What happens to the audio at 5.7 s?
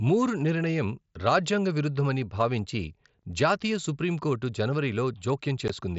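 At 5.68 s there is unconcealed Bluetooth headset packet loss. About 15 ms of speech, which fits two dropped headset packets, is replaced by silence or an idle pattern with nothing to mask it. This leaves a brief hole with abrupt edges. The waveform shows a gap with abrupt cuts, and the spectrogram shows a thin vertical band across the mSBC headset range up to 8 kHz.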